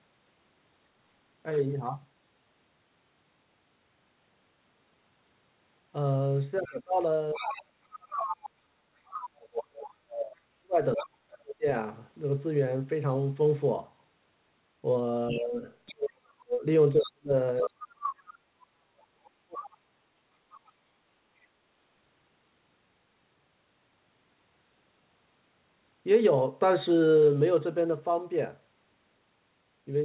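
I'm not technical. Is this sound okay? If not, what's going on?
No, not entirely. Two related problems show up, both in stretches where two people talk at once.

The first is speech suppressed in double talk. From about 6.6 to 11.7 seconds, and again from about 15.3 to 20.0 seconds, the main speech keeps dropping away. At its worst it falls to near silence. The likely cause is the call's echo canceller. It couldn't tell this talker apart from the other person's voice coming out of the loudspeaker, so it turned everything down.

The second is the other side's voice leaking through. A fainter second voice can be heard behind the main one from 6.65 to 9.2 seconds, briefly at 10.96 to 11.09, then 15.29 to 15.9, 16.99 to 18.13, and 19.61 to 20.72 seconds. In that last stretch it is very faint. It likely comes from the loudspeaker reaching the microphone without being fully removed.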